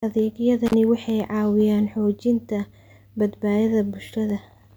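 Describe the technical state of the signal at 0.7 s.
At 0.7 s there's an intermittent contact between 0.66 and 0.74 s: a loose connection opens for about 37 ms, dropping the speech out with crackle either side and faint hiss underneath.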